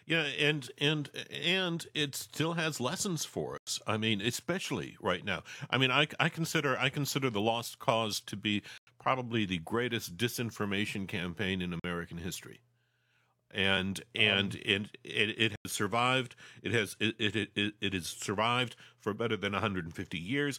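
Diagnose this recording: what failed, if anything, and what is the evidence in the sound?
Block of digital silence at 3.58, 8.78, 11.80 and 15.56 s: the speech cuts to silence for 93 ms (46 ms at 11.80 s). The driver or buffer stage missed its deadline to fill output; the lengths fit 4096- and 2048-sample buffers.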